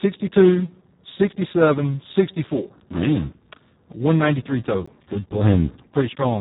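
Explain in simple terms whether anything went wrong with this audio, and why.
Two things went wrong here.

The first is Speex codec damage, and it runs through the whole clip. Speex is an older speech codec used for internet calls and game chat. Here it was set very low, so it had too little data to rebuild the speech properly. The speech comes out hoarse, noisy and somewhat robotic. It also sounds muffled, because nothing above about 3.8 kHz survives. The crisp top end of sounds like s and t is gone.

The second is a block of digital silence at 4.86 s. For about 15 milliseconds the sound was replaced by silence. It cuts out instantly and comes straight back, with no fade either way. The gap is too short to hear as a pause, so it comes across as a quick tick or pop in the speech.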